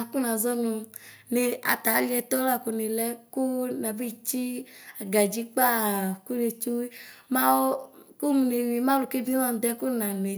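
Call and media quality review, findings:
No audible faults found.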